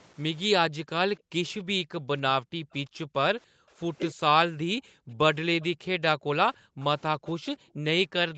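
A speech recording over a call path, with the upper range ending at 8 kHz. Background gated by the echo canceller appears at 0.68–3.8 s, 4.5–5.1 s, 5.72–5.86 s and 6.57–7.84 s: while the far end plays through the loudspeaker, the canceller pulls the microphone down by about 40 dB, so the room sound drops out in stretches (roughly a second and a half in the first window) and returns once it releases. At 4.11–4.19 s the talker's voice dips sharply for a brief moment, likely speech suppressed in double talk, with the canceller attenuating the near talker along with the loudspeaker echo while both sides overlap. A faint delayed copy of the voice arrives 287 ms behind the original at 5.61–5.67 s and again at 6.8–7.47 s, well below the direct speech and a little stronger the second time, likely an echo leak where the canceller fails to remove all of the loudspeaker signal reaching the microphone.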